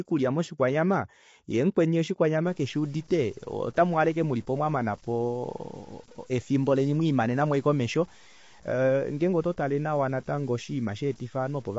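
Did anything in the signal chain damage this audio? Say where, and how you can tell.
Yes. Throughout, the speech sounds rough and grainy with nothing above 7.7 kHz. This is likely low-delay AAC compression at the codec stage, consistent with roughly 24 kbps.

From 2.46 s, after "moshikwanyamana yee mukweni", to the end, gritty distortion tracks the signal about 30 dB down. Sample-format conversion likely introduced low bit depth without dither, consistent with 8-bit truncation.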